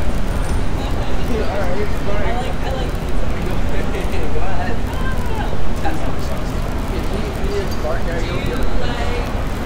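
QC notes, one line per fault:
3.84 s, bit error spike: there's a single sharp tick here, one sample jumping to about -16 dBFS and dropping straight back. A bit got flipped somewhere along the digital path, in memory or on a link, so that one sample value leapt by a power of two and then returned. Because it's just one isolated sample, the click spreads energy across the whole spectrum and has nothing to do with the surrounding sound.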